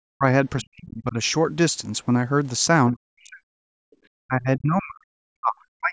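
The speech drops sharply, by about 40 dB at its deepest, in short stretches from 0.15 to 0.25 s, from 0.59 to 1.17 s, and from 2.92 to 3.48 s, and then dips from 4.26 s to the end. This is likely speech suppressed in double talk. With both ends talking at once, the echo canceller could not tell this talker from the loudspeaker echo, so it turned the microphone down and took the voice with it.

Between those dips, from 3.76 to 3.98 s, the room sound itself falls away by about 40 dB and then comes back. This is background gated by the echo canceller. While the loudspeaker was playing, the canceller clamped the microphone hard, and the ambience returned once it released its hold.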